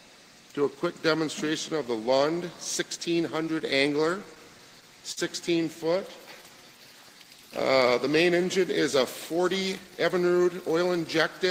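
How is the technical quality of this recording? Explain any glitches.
The recording has three network-playback glitches, each confined to a short stretch, and they come from the receiving end's handling of delayed or missing packets.

Between 3.59 and 5.19 s there are scattered short gaps: around seven small losses, the longest about 50 ms, together roughly 100 ms. The receiver bridged each by extending the preceding sound, so you hear brief ticks and smears. A spectrogram shows small frozen, horizontally stretched patches.

From 5.98 to 7.16 s a jitter buffer slow-down plays the audio at 95% speed, adding 68 ms. Short pitch-period chunks were repeated to rebuild the buffer's reserve, so sounds drag slightly at unchanged pitch. The waveform shows repeated, near-identical cycles.

From 9.32 to 10.45 s a jitter buffer speed-up runs at 107%, cutting roughly a tenth of a second. Small pitch-period slices were dropped to shrink excess delay, making the passage sound hurried without raising pitch. 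On a spectrogram, events appear compressed in time.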